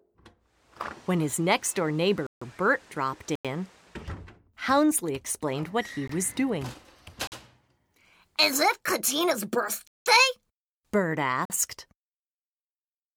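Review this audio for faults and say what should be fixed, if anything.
Six short holes occur where the sound drops to dead digital silence and returns with no fade: at 2.27 s (149 ms), 3.35 s (93 ms), 6.08 s (18 ms), 7.27 s (46 ms), 9.87 s (186 ms) and 11.45 s (46 ms). Each is a block of digital silence, where output samples were left as zeros because the buffer went unfilled in time. Several lengths fit whole buffers of 2048, 4096 and 8192 samples. Enlarge the output buffer and keep processing comfortably within each buffer's deadline.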